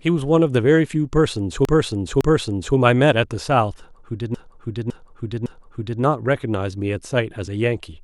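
At 1.65 s the speech stutters. The same 0.56 s stretch plays twice more, through 2.77 s, which fits a run of about six compressed frames. This is repeated frames: the decoder received or read that block more than once and played it again each time. At 4.34 s it happens again. The same length of block now repeats three extra times, until 6.02 s. The two stutters add about 1.1 s and 1.7 s to the audio.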